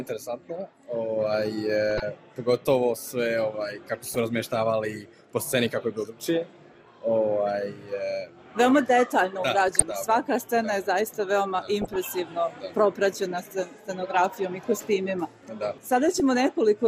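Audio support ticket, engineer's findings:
Dull, band-limited top end with gurgling, granular texture throughout; upper sub-bands flicker on and off. Likely MP2 compression, with bit starvation cutting whole bands, which fits a rate near 80 kbps. Steady across the clip, unlike burbling.

DAB burbling: brief blips of noise in single sub-bands at 1.89–2.02 s, 4.04–4.20 s, 9.68–9.92 s, 11.82–11.96 s and 16.15–16.20 s. Weak-reception bit errors, a fraction of a percent, corrupt sub-band samples and scale factors. Isolated bursts, not the constant dullness of compression.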